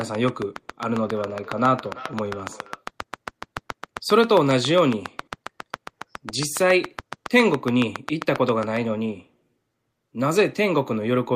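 A train of clicks runs from 0.01 to 8.78 s in this speech recording: about seventy near-identical pops at a regular 7.3 per second, peaking roughly 15 dB above the speech and audible in the pauses too, likely from interference from nearby equipment or a faulty connection or power supply. Feedback echo between two devices appears from 0.91 to 2.86 s. A second device in the room replays the call, its microphone sends it back, and no echo canceller removes it. Each word returns about every third of a second, thinner and more ringing, at its loudest about 20 dB below the speech.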